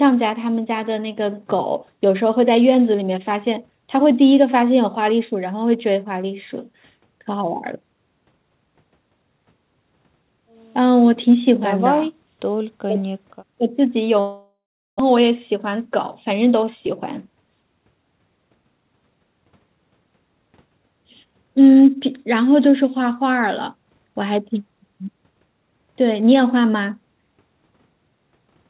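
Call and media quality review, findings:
Long network dropout, 14.2–15.02 s: the last sound is stretched into a fading buzz, then about 0.4 s of near-silence. Roughly 0.6 s of speech never comes back. Likely cause is network packet loss. Unlike a short concealed gap, concealment gives out and content is skipped.

Jitter buffer speed-up, 15.10–15.85 s (108%) and 16.31–16.87 s (107%): repeated pitch-period cuts remove about 70 ms and 50 ms. Delivery sounds hurried at unchanged pitch. The buffer is draining the backlog after the outage, unlike resampling, which would raise pitch.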